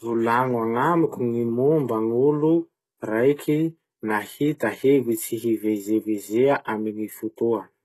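Throughout the speech the sibilants sound gritty and metallic, with nothing at all above 12.3 kHz and plainly audible coding damage. This is likely HE-AAC compression, rebuilding the treble from copied lower bands, which fits a very low bitrate near 16 kbps.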